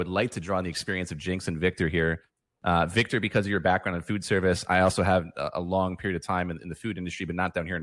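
No technical faults can be heard anywhere in this speech recording.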